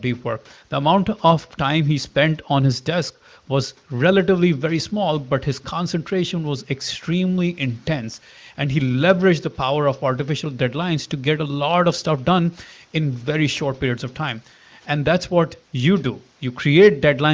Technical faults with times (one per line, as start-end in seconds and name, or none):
none